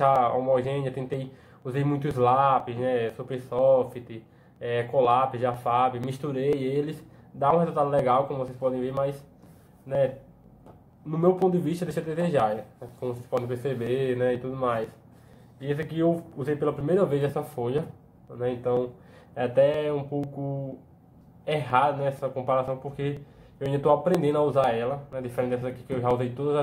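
From 0.16 to 26.11 s, periodic USB or driver dropouts skip about 10 ms every 0.49 s, giving metronome-regular ticks rather than randomly timed clicks.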